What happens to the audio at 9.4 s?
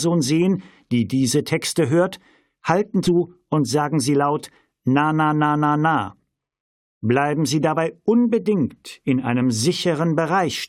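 Nothing goes wrong at 9.4 s; the audio plays through that moment intact, with no dropout, click or other fault.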